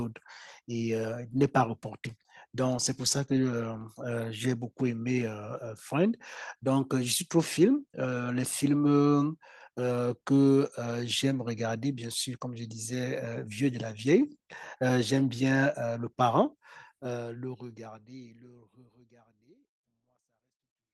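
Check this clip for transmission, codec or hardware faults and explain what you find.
The signal shows no technical faults, and the only level change is a smooth fade out that begins around 17 s and finishes at 20.9 s with no click or hard edge, just as an editor would apply it.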